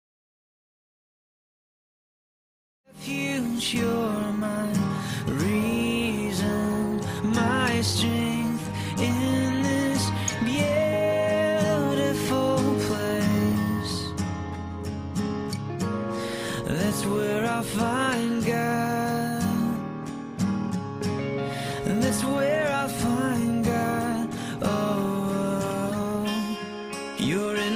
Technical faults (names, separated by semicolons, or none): none